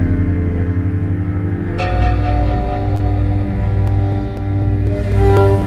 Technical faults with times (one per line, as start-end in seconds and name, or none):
2.89-3.01 lost packet rebuilt from error correction
2.95-3.01 short concealed packet loss